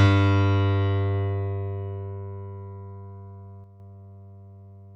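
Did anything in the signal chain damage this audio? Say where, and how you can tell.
Yes, there's a sudden gain jump at about 3.64 s, where the level drops by about 6 dB in a single step. The background drops right along with the foreground sound until 3.8 s, so it's a gain change rather than a change in the source. Nothing in an analogue path would step that cleanly. It's likely a digital gain setting applied with no ramp, and a drop of exactly 6 dB fits a one-bit shift of the samples.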